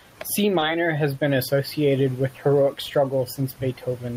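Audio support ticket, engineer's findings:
Short stall from a late packet, 0.59–0.71 s. Jitter buffer underrun: packet missed its playout slot, receiver held and stretched the preceding speech for about 20 ms until it arrived, then resumed at the same point. No speech lost. Audible as one sound drawn out slightly, with a faint buzz or dip. Playout delay 20 ms longer after the event.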